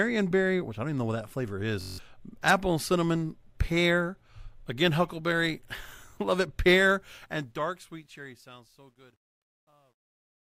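Speech, with two faults. At 1.81 to 1.98 s, between "know what that flavor" and "apple and cinnamon pear", a system hang loop occurs: the system stalled while the hardware replayed one buffer, so a 21.33 ms slice repeats eight times as a 46.9 Hz buzz, which fits a 1024-sample buffer and loses about 150 ms of audio. From 7.00 s to the end, the fade-out shows truncation distortion on a fade: the gain stage dropped to roughly 11 bits without dither, so from 8.47 s onward the fading tail turns gritty.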